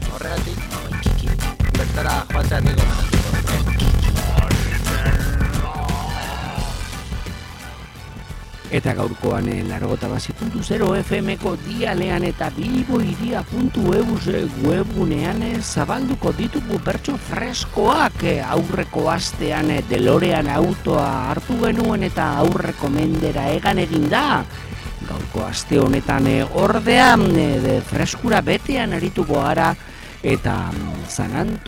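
From start to finish there's a block size mismatch (padded): one stage hands over blocks shorter than the next stage reads, and the shortfall in each is filled with silence. That drops a tiny gap into every block, so you get a steady buzz at about 43.1 Hz, which fits a 1024-sample read block. The whole thing also plays slow, at 0.861 times normal speed, yet the timbre stays.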